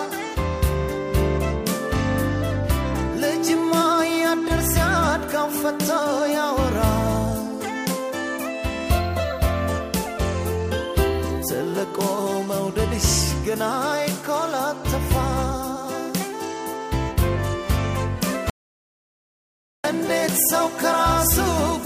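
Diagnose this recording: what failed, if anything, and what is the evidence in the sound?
An audio dropout to silence runs from 18.5 s to 19.84 s, about 1.34 s. The sound stops abruptly and returns mid-flow, with silence and no room tone in the gap. The input was likely lost at the capture stage while the recorder kept writing silence.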